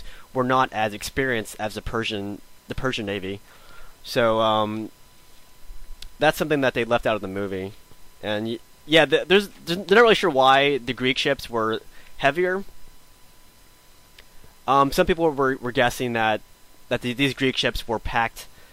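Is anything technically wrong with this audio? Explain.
Yes. Throughout the clip there is a thin, steady whine fixed at 1 kHz, sitting roughly 40 dB below the signal. This is USB whine: current drawn in 1 ms bus frames leaks through the power or ground path, leaving a constant 1 kHz tone.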